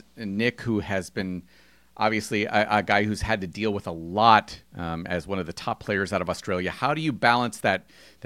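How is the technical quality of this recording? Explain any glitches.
Nothing in this speech recording trips up the ear, so there's no glitch here to explain.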